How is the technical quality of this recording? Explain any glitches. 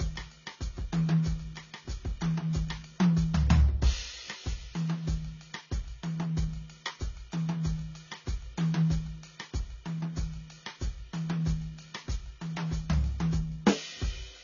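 The quality is poor throughout the music. Nothing comes through above 7 kHz. The sound is dull, with smeared, swirling artefacts. This is likely transcoding between lossy codecs: the character fits low-bitrate AAC re-encoded through Vorbis and back to AAC. Each pass added its own damage on top of the last.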